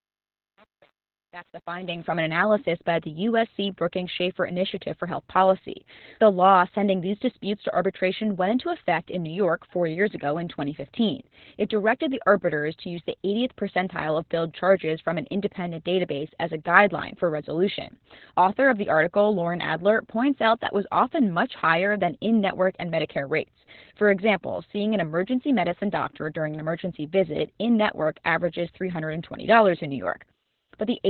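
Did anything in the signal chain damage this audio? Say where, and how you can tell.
Yes. At the codec stage, Opus voice compression in SILK mode, narrowband and likely near 8 kbps, cuts everything above 4 kHz and codes the excitation coarsely, leaving speech muffled, hoarse and robotic throughout.

At the gain or sample-format stage, truncation distortion on a fade roughens the fade from 0.00 to 2.14 s. Undithered steps, fitting an 8-bit stage, make its quietest part gritty.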